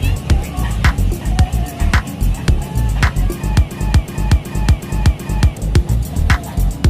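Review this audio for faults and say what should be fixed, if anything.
From 3.72 to 5.57 s the audio stutters like a machine gun, one 0.37 s fragment repeating five times at 2.69 Hz while about two seconds of material is lost. This is a system hang loop: the computer or driver froze while the sound hardware kept replaying its ring buffer, whose length fits a 16384-sample buffer. To prevent it, give the audio thread real-time priority and add a watchdog that mutes output when the buffer stops being refilled.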